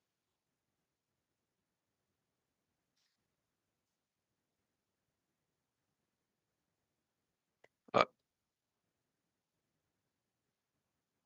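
No faults are present in this speech recording; nothing in it calls for correction.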